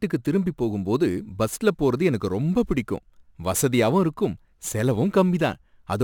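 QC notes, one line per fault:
Throughout, crude rate conversion: the speech was converted from 44.1 kHz to 48 kHz by simply repeating nearest samples with no interpolation filter, so a patterned error repeats at a rate set by the two rates. It adds a gritty, inharmonic fizz roughly 25 dB below the signal, riding on louder and brighter syllables.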